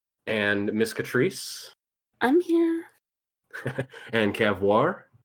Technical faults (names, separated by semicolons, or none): skip ahead; jitter buffer speed-up